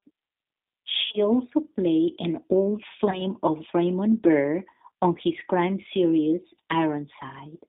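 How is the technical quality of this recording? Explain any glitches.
The quality is limited: G.729 coding runs through the whole recording, and packet loss breaks it twice.

The G.729 codec damage is plainly audible. It rebuilds speech at 8 kbit/s from a vocal tract model and sparse pulses, and passes only about 150 Hz to 3.7 kHz. Speech sounds narrow, slightly rough and synthetic.

VoIP packet loss concealed by the speech codec occurs at 1.06 to 1.19 s and 3.10 to 3.22 s. The decoder extended its last pitch and filter. The first gap is about 70 ms of losses over 80 ms, and its brief stretched sound fades. The second, about 20 ms, is a shorter smear.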